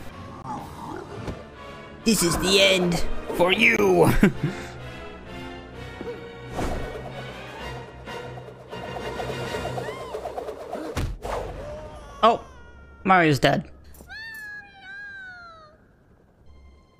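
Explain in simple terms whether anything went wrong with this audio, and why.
Two brief gaps at 0.42 to 0.44 s and 3.77 to 3.79 s, each about 20 ms long, point to a likely Bluetooth dropout. Unlike a pause, the audio comes back further along, as if it kept playing during the silence.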